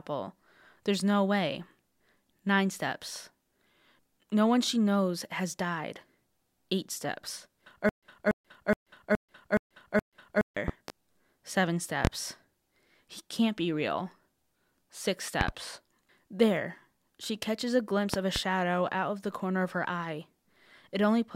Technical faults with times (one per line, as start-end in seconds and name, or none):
7.89-10.57 stutter with silent gaps
10.68-10.92 loud pop
12.05-12.09 loud pop
15.41-15.52 loud pop
18.14-18.40 loud pop